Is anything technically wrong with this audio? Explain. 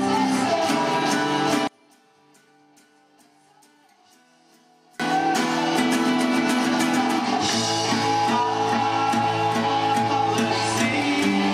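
Yes. From 1.67 to 5.00 s the sound drops by about 35 dB to a faint remnant, likely from one channel inverted: with one side's polarity reversed, everything common to both channels cancels when they are summed. Unlike a dropout, a faint difference signal remains rather than silence.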